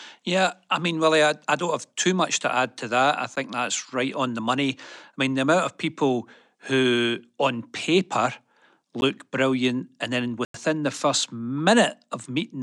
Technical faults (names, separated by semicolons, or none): block of digital silence